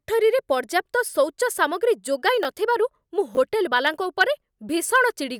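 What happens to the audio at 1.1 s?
Nothing goes wrong at 1.1 s; the speech carries on intact through that moment, with no dropout, click or other fault to be heard.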